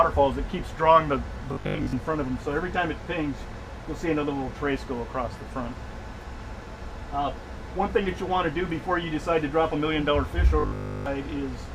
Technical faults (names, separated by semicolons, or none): robotic sound from repeated short buffers